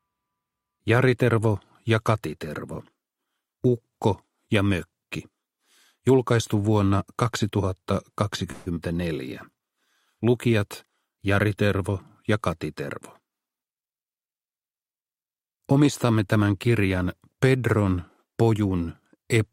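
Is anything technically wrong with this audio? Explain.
Yes. Four network-related faults occur in this audio.

From 8.51 to 8.68 s there is a call audio freeze. For 149 ms the last sound carries on as a fading buzz, then playback resumes where it stopped. The likely cause is delayed packets draining the jitter buffer. Nothing is lost, but a 149 ms gap is inserted.

From 8.74 to 8.78 s playback will skip ahead. Roughly 70 ms of audio is dropped, probably because later packets were already queued. The two sides are joined almost directly, so the sound lurches forward with a tiny seam.

From 9.51 to 9.87 s there is a jitter buffer slow-down. The receiver repeats single pitch periods to rebuild its reserve, adding 61 ms. The audio plays at 85% speed with unchanged pitch. Sounds are drawn out.

From 12.85 to 15.35 s there is a jitter buffer speed-up. The buffer held too much audio, so the receiver trims short pitch-period pieces, removing roughly 150 ms. 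The audio runs at 106% speed with the same pitch and sounds hurried.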